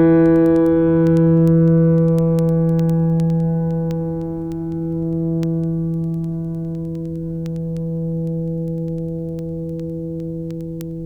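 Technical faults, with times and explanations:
0.16 to 11.01 s, word clock ticks: the receiving device runs on its own clock, about 200 parts per million off the sender's, so one sample is dropped or repeated each time they slip, giving around a hundred sharp ticks roughly every tenth of a second through the music.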